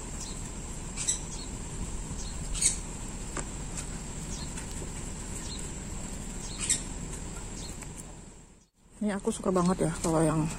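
An electrical switching spike sits at 4.71 s. It is a sharp snap laid on top of the sound, lasting only a few milliseconds. It peaks at roughly -25 dBFS. The likely cause is a nearby switch or static discharge arcing into the audio line.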